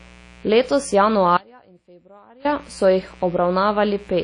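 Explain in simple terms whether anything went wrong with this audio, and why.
A few things went wrong here. There's a steady, raspy mains buzz running under the whole clip, built on the 60 Hz power supply and spiky enough to reach well up into the treble. The sound is also washy and ringing, with hiss that swells and shrinks with the speech and nothing above about 10.1 kHz, so it was likely squeezed through WMA compression. Then from 1.37 to 2.45 s, about a second, the speech suddenly drops out to a faint residue and snaps back at "so jih". That's likely an audio dropout where the signal was lost but the line stayed live.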